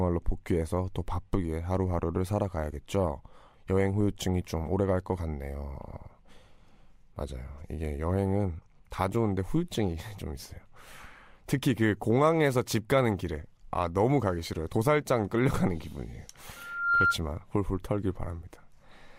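From 16.56 s to 17.18 s there is loudspeaker feedback squeal: the microphone picked up the loudspeaker it was feeding, and at 1.4 kHz the loop's gain rose above one, so that frequency kept re-amplifying itself. It is heard as a single steady tone that swells over just under half a second until it sits a few decibels above the speech, then stops.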